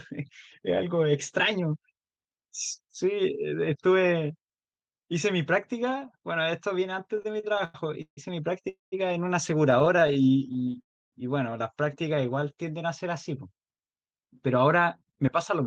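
From 7.17 to 8.19 s, packets kept reaching the receiver late, so its jitter buffer ran dry nine times. The result is repeated stalls (stutter): each gap is filled by stretching the last sound, 335 ms in all and up to 149 ms at once. About a third of that second drags and catches, though nothing is lost.

At 8.69 s a call audio freeze holds the sound for about 0.23 s, most likely because a packet delay emptied the buffer. The last sound lingers, then drops to silence for about 150 ms before resuming where it stopped.

From 9.71 to 10.76 s the stutter returns in a finer form: fourteen short stalls, none longer than 18 ms, adding 160 ms. The speech sounds choppy rather than stopped. A second freeze follows at 10.82 s, lasting about 0.3 s, almost all of it silence.

Between 11.85 and 12.63 s the buffer was rebuilding its reserve. It repeated single pitch periods, adding 81 ms. This jitter buffer slow-down plays the speech at 90% speed with unchanged pitch, so the sounds are drawn out.

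From 14.05 to 15.61 s the buffer held too much. It trimmed roughly a tenth of a second in small pieces. This jitter buffer speed-up runs the speech about 7% fast, slightly hurried, at the same pitch. Throughout, the Opus call path caps the highs near 12 kHz.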